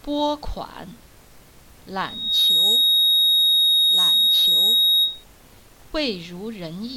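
At 1.99 s a loudspeaker feedback squeal starts: a microphone is picking up the loudspeaker it feeds, and at 3.8 kHz the loop gain exceeds unity, so that frequency reinforces itself on each pass. The tone swells over less than half a second into a piercing whistle that sits well above the rest of the sound, roughly 15 dB louder, and holds until the loop is broken at 5.24 s.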